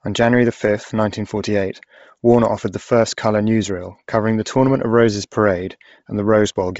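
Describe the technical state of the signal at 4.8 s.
Bluetooth LC3 compression is present at 4.8 s, as it is across the whole speech clip. The sound likely passed through the LE Audio transform codec at a low rate. The heavy damage points to roughly 24 kbps with short 7.5 ms frames. At that rate the codec discards much of the upper spectrum and fills the gaps with synthetic noise. The speech has a breathy, grainy edge, and nothing remains above about 7.7 kHz.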